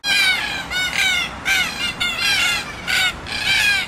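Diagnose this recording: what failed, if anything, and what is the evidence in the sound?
The codec stage failed: compressed frames were skipped in decoding. At 1.98 to 2.05 s the audio jumps forward by roughly 70 ms, and at 3.09 s by roughly 50 ms. Each jump lands on a whole number of codec frames that were either missing or rejected as damaged. No silent gap is inserted at either join. That distinguishes it from a buffer dropout or a sample-level discontinuity.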